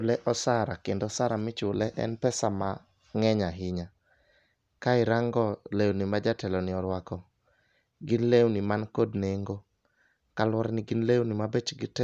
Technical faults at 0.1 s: none

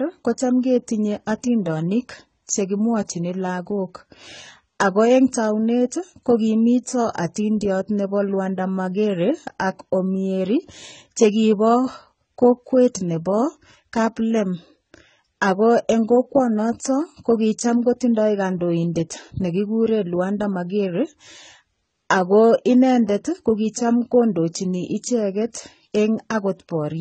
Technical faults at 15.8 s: transcoding between lossy codecs

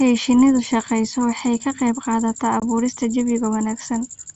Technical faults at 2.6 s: packet loss on an ADPCM call

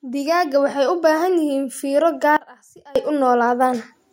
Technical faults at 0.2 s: automatic gain rising

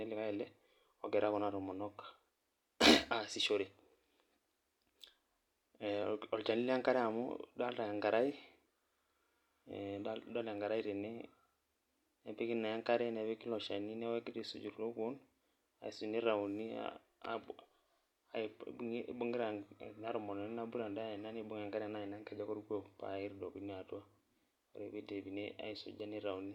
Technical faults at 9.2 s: none

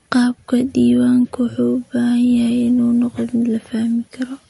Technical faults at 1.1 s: MP3 compression

